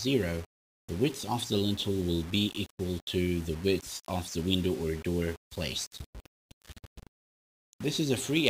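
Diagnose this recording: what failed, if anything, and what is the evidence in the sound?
Sample-format conversion likely applied low bit depth without dither, consistent with 6-bit rounding. Grainy distortion that follows the signal runs throughout, roughly 20 dB below the sound.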